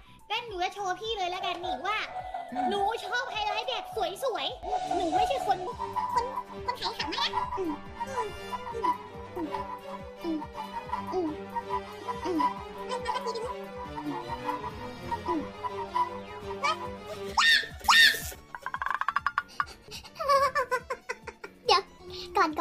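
Part of the audio was likely played out against the wrong clock, so from 5.67 s to the end it runs as a section at the wrong speed. It plays 1.34 times faster than recorded, and pitch rises with tempo by roughly five semitones, so the sound turns hurried and noticeably higher.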